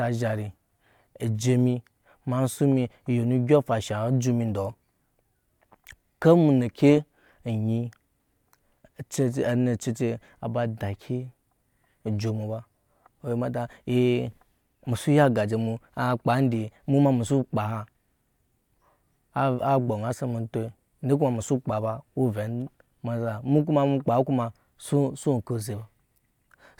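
No technical faults can be heard anywhere in the recording; the signal stays continuous and steady throughout.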